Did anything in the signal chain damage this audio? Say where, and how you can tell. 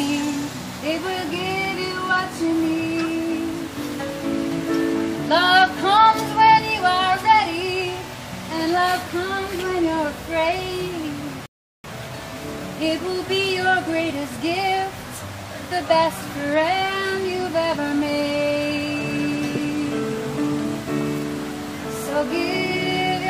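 Yes, at the playback stage: a rebuffering stall from 11.46 to 11.84 s. The player's downloaded audio ran dry, so it went silent for about 0.38 s and then carried on from the same point. Nothing is missing, only time added. On a waveform it shows as a flat gap, and on a spectrogram as a clean blank column.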